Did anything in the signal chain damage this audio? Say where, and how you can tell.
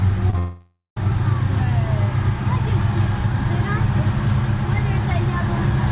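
Yes, at the network stage. Short concealed packet loss hits at 0.30 to 0.34 s and again at 0.34 to 0.35 s. Brief smears or wobbles mark where about 20 ms and 10 ms of audio went missing. The receiver patched each hole by extending the preceding sound.

A long network dropout follows from 0.38 to 0.97 s. About 0.58 s never arrives. The receiver stretches the last sound into a fading buzz or hiss, then leaves about 0.13 s of near silence. This is likely a network outage, since the audio resumes later without the missing stretch.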